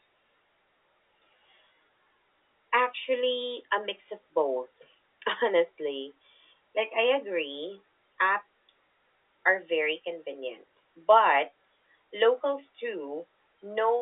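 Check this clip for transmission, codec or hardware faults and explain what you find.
No transmission, codec or hardware fault can be heard in the speech. The G.711 telephone coding is audible as a narrow phone-line band of about 300 Hz to 3.6 kHz, with nothing above 3.8 kHz.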